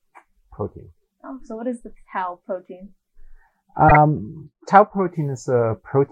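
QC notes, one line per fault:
3.88–3.97 s: corrupt frame decoded. A short burst of harsh, chirp-like noise cuts across the sound for about 80 ms. Its length points to a single damaged compressed frame that the decoder played instead of concealing. Flipped bits scrambled the frame's gains and spectral codes, so energy landed at frequencies unrelated to the surrounding material. The error lasts about one frame, so the burst starts and stops abruptly.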